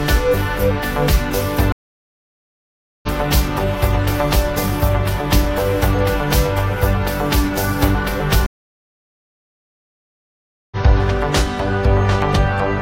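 At 1.72 s there's a stream reconnect: the connection drops, about 1.3 s of silence, then a fresh decoder picks up roughly a second further on. Between 5.58 and 5.99 s come three CD scratch ticks, tiny sub-millisecond blips where damaged data got patched over once per disc turn. At 8.46 s a second reconnect leaves about 2.25 s of silence, resuming around two seconds later.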